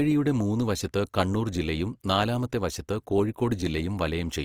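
Throughout the speech, the audio has likely been through Opus compression at a low bitrate, with a roughness that fits something near 24 kbps in the codec's music-oriented CELT mode. Short of bits, the encoder keeps each band's overall energy but refills its detail with folded copies of lower bands or with noise. The damage is plainly audible: voiced sounds turn grainy and rough rather than swirling. The bandwidth stays full, with nothing above 20.3 kHz.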